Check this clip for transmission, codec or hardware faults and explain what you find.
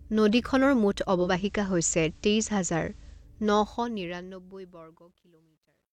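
Two faults are present in this speech clip.

Digital radio blending to analogue, from 1.15 s to 3.29 s: the receiver lost its digital stream and cross-faded over about 188 ms to the FM broadcast of the same station, then back. While on FM, hiss rises to sit roughly 35 dB below the signal. The level stays the same across both blends.

Truncation distortion on a fade, from 3.60 s to the end: the fade-out was computed at only 11 bits with no dither. As the level drops toward the smallest step, the waveform collapses into coarse staircases, so the tail turns gritty. It is worst from 4.83 s to 5.93 s.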